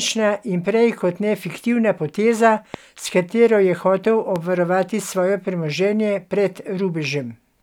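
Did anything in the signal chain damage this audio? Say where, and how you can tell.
Yes. Loud pops, about 10 dB over the speech, at 2.74–2.76 s after "kot ne fiktivna poteza" and 4.36–4.38 s before "obvarovati svoje premoženje pred". Speech continues underneath. Likely a voltage spike in the analogue wiring.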